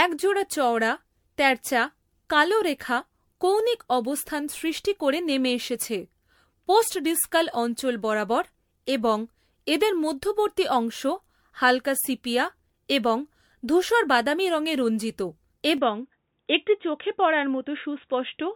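Repeated lossy coding throughout, likely MP3 at 96 kbit/s re-encoded around seven times, causes generation loss: each pass requantises on a shifted frame grid, so the speech sounds swirly, smeared and hollow, with softened consonant attacks and nothing above 19.9 kHz.

At 15.78 s, right after "ধূসর বাদামী রঙে রঞ্জিত", the input likely switched to a poorer device and stays there to the end. With no gap and no real level jump, the band narrows to about 3.8 kHz, making the sound dull and boxy, over new background noise roughly 55 dB down.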